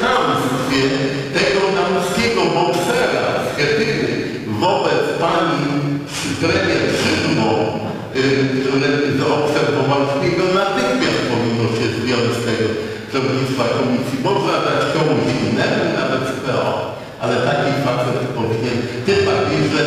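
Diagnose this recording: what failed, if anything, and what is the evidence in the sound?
Periodic clock jitter at the converter runs throughout. Sidebands about 2 kHz either side of each component add a metallic roughness, strongest on high content.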